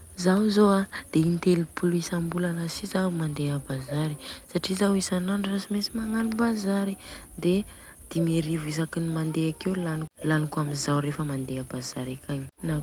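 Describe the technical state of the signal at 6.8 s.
At 6.8 s the speech signal is intact, with no audible fault at that point.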